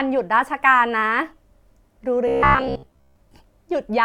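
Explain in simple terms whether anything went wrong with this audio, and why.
From 2.28 to 3.16 s the voice turns into a metallic buzz around 67 Hz: robotic sound, likely from audio arriving late and a 15 ms buffer replaying.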